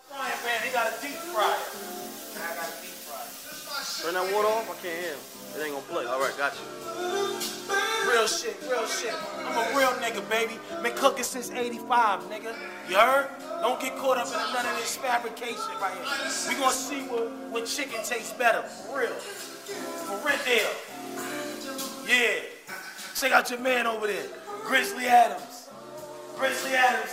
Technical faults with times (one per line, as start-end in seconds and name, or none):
none